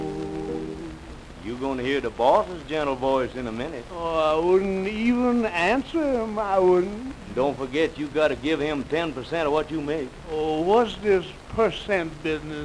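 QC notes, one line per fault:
No faults found, so these QC notes have no fault lines to log.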